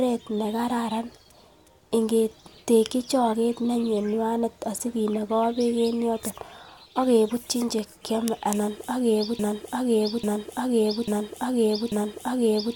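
A broken-record loop takes over this speech clip at 9.39 s, just after "che kyome anan ak", and runs to the end. A fragment of about 0.84 s repeats exactly, back to back, four times, replacing whatever should have followed. The likely cause is a player, encoder or stream that stalled and kept resending its last held fragment.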